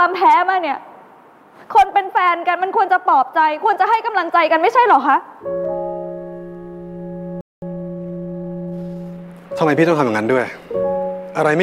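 The player likely ran short of data or had its thread blocked, causing a playback stall: the audio cuts to silence from 7.41 to 7.62 s, a gap of about 213 ms. To clear the resulting backlog, the player then applies time-compressed catch-up, trimming and cross-fading small segments so that from 7.62 to 9.74 s the sound runs hurried at 1.1 times speed, pitch unchanged.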